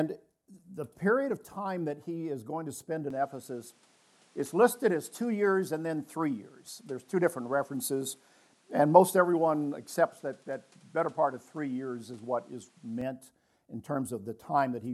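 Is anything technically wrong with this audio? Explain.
Yes. From 3.10 s to 13.01 s the input was likely switched to a poorer device, such as another microphone or a headset in call mode, before switching back. That device passes nothing above 12 kHz and brings its own background noise, sitting roughly 35 dB below the signal. So the sound loses its top end and takes on a different tone and noise floor through that stretch, then clears again. The level stays about the same, with no gap at either switch.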